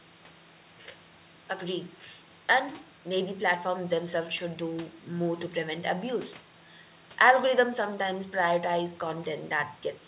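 No faults can be heard anywhere in this recording.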